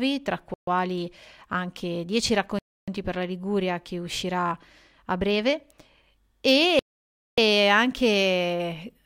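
The speech drops to total silence three times, each gap longer than the last. At 0.54 s it vanishes for 134 ms. At 2.59 s it goes quiet for 290 ms. At 6.79 s the silence lasts 586 ms. Each time the sound resumes abruptly where it stopped. The likely cause is a Bluetooth stall: radio interference delayed packets, the headphone buffer emptied, and playback waited for the resent data.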